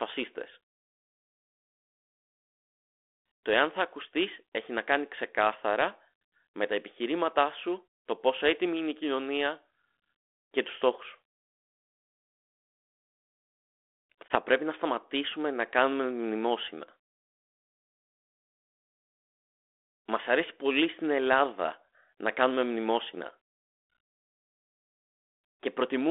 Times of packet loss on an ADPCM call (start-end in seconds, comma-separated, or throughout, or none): 14.28-14.35